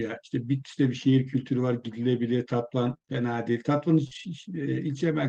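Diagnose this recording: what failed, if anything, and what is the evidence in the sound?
The failure sits in the network stage, as scattered short gaps in the speech between 2.85 and 4.25 s. Across that stretch about 100 ms of audio went missing in roughly four small holes, the longest around 40 ms, and the receiver bridged them by stretching the preceding sound over about 180 ms. That leaves brief smears and hiccups rather than the hard silences or clicks of a local buffer underrun, all heard through the Opus call codec's 12 kHz bandwidth.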